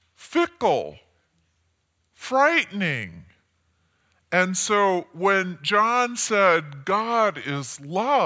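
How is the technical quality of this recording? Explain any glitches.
The recording has one fault. Throughout, a wrong sample rate slows the speech to about 0.73 times normal speed and drops pitch by 5.55 semitones, which fits 22 kHz material played back at 16 kHz.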